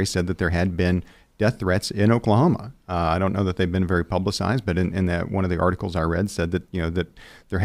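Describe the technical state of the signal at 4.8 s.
At 4.8 s the speech signal is intact, with no dropout, clipping, glitch or other technical fault at that point.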